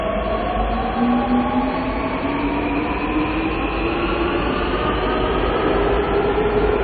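From start to end, the sound carries plainly audible MP3 compression damage, likely from an encoder starved of bits, which fits a low bitrate of around 24 kbps. Nothing remains above 4.5 kHz, so the top end is dull and closed-in. Unlike a simple low-pass filter, the band below the cut-off also breaks up, as weak frequency components drop in and out between frames, leaving a watery, swirling texture and smeared attacks.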